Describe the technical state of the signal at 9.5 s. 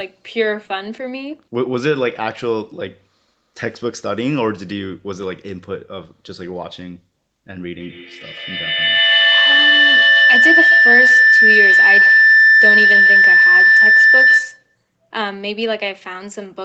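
At 9.5 s the signal is inside a feedback howl running from 7.79 to 14.77 s. A microphone-to-loudspeaker loop gains level on each pass, building a tone near 2 kHz, with repeats roughly every 150 ms, and peaks about 9 dB above the speech. On a spectrogram it appears as a bright horizontal line, and the waveform swells into a dense envelope.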